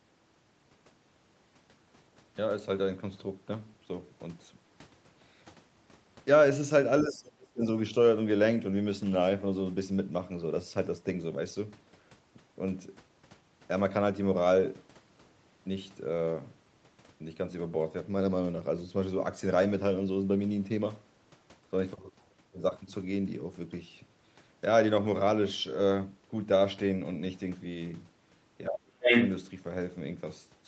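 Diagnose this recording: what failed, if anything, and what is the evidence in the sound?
The failure sits in call processing, where the echo canceller handles double talk. Speech suppressed in double talk appears from 7.01 to 7.64 s and again from 28.69 to 29.10 s. The near-end speech sinks by up to roughly 30 dB in each window. The likely cause is that the canceller mistook the talker's speech for loudspeaker echo while both sides spoke at once, and attenuated the microphone signal as a whole.

Residual echo, the other side's voice leaking through, follows at 29.02 to 29.30 s. It overlaps the tail of the second suppression and runs just past it. The leaked voice sits only a few dB off the near-end speech level. The likely mechanism is that the canceller did not remove all of the loudspeaker signal from the microphone, so part of the far-end signal passed through uncancelled.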